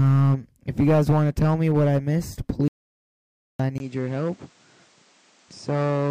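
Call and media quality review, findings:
Audio dropout to silence, 2.68–3.60 s: about 0.92 s of dead silence with no room tone. Likely the input was lost (device, link or mute) while silence kept getting written.

Input switched to a poorer device, from 3.78 s to the end: about a 20 ms gap, then nothing above 9.1 kHz, level down about 5 dB, and new noise roughly 35 dB below the signal. Likely another mic or a headset call profile took over.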